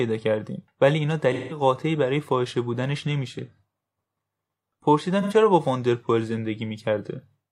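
At 1.33 s to 1.61 s the speech breaks into a smeared, noisy patch lasting about 0.17 s, a span that fits roughly four AAC frames. This is AAC frame loss with concealment: the decoder lost those frames and rebuilt the gap from the last good spectrum, so the content blurs rather than cutting out. A shorter recurrence at 5.21 s to 5.33 s, about 0.085 s or some two frames, gives a briefer phasey smear.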